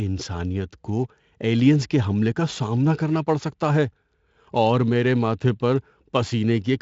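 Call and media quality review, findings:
Sample clock jitter, whole clip: fine hiss and grit riding on the speech, worst on loud, bright passages, gone in the pauses. Probable component is the ADC/DAC clock. Timing wobble of roughly 7 µs turns steep waveform slopes into error around 25 dB down. Speex path is clean, band stopping near 7.6 kHz as expected for wideband, so it's not a codec issue.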